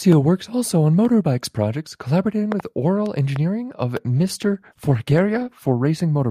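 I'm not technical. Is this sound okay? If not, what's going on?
No. There are two problems.

Loud pop at 2.52 to 2.62 s, heard as two quick pops right after "on motorbikes project collaborating", and a single loud pop at 3.36 to 3.38 s. Both are clearly louder than the speech, which carries on underneath. They are most likely sudden electrical jolts, from something like a plug being moved, a switch being flipped or static, that got into the recording equipment and came out as sharp clicks.

Call bitrate drop from 4.07 to 5.79 s. The call's connection seemed to weaken, so the software sharply cut how much detail it sent to keep the call going. For most of that stretch, close to 1.7 seconds, the voice sounds rougher and more muffled, with the crisp upper tones missing, until the connection recovers.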